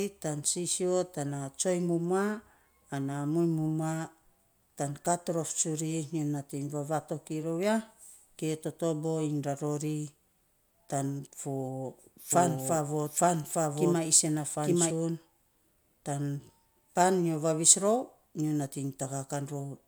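A speech clip with a doubled audio track between 12.33 and 14.91 s: a second, full-band copy of the speech runs roughly one second behind, at about the same level, with no decay or room colour, and it cuts in and out abruptly. The likely cause is the signal being captured twice through a slower path or an edit leaving two offset copies. On a spectrogram, identical harmonic patterns repeat one second apart, and the waveform shows overlapping envelopes with hard edges.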